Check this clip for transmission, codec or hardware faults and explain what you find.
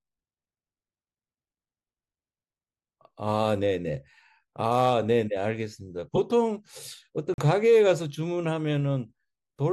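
Two faults stand out in this speech: one damaged codec frame that was decoded anyway, and one block of digital silence a little over a second later.

At 6.15 to 6.18 s, a corrupt frame was decoded. Flipped bits in a single compressed frame left the decoder reading wrong gain values or misreading codes, and it played the result instead of concealing it. For those roughly 26 ms the energy lands at the wrong frequencies, so the speech is briefly replaced by a short, unnatural chirp or burst of noise.

From 7.34 to 7.38 s there is a block of digital silence. The output buffer was likely not filled in time and went out as zeros for about 43 ms, a length that fits a 2048-sample buffer at 48 kHz. The signal drops out and returns with no fade, and in between the speech vanishes completely, heard as a short hole.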